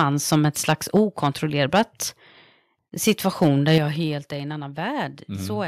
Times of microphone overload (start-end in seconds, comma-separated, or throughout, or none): 0.00-0.03, 0.32-0.36, 0.68-0.99, 1.25-1.27, 1.75-1.82, 3.07-3.78